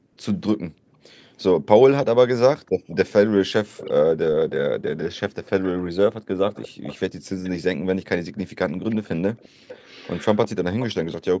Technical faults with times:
0.00-2.95 speech suppressed in double talk
2.89-10.93 echo leak
4.15-9.57 speech suppressed in double talk

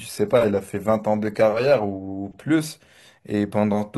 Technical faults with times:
0.00-2.50 adaptive stream starting at a low bitrate

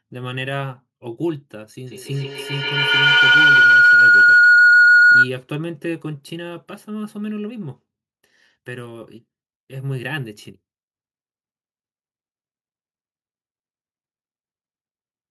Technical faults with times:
1.87-5.35 feedback howl

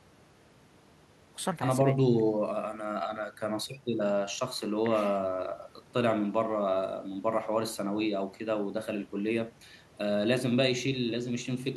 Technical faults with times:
none

